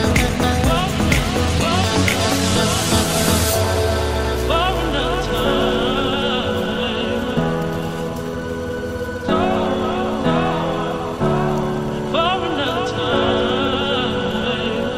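Filter restarted on every block, present from start to finish: a steady buzz near 188 Hz rides on the audio and grows and shrinks with its level. A filter in the chain appears to discard its memory at each block boundary and begin again from silence, so every block opens with a small transient. Repeating at that rate, the transients fit a 256-sample block and merge into a tonal buzz rather than separate ticks.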